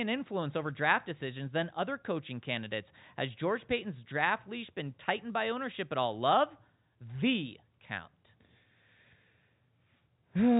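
No technical faults are audible in the speech, which carries the narrow band of G.711 telephone coding with nothing above about 3.8 kHz, consistent with a 64 kbps mu-law line.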